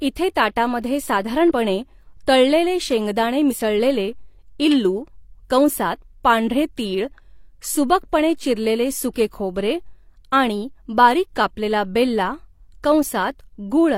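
At 1.47 to 1.52 s and again at 3.48 to 3.55 s, the speech briefly lurches forward by about 40 ms: compressed frames skipped, left out rather than played.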